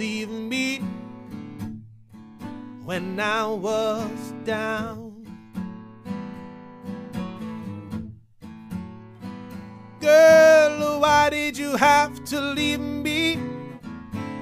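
Nothing goes wrong anywhere in the recording, so there's no technical fault to point to from beginning to end.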